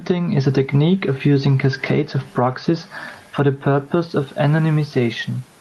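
Speech with gain pumping throughout: the gain swings by roughly 15 dB, pulled down under every loud syllable, likely from far too much input gain with a fast limiter clamping it. The waveform looks flattened.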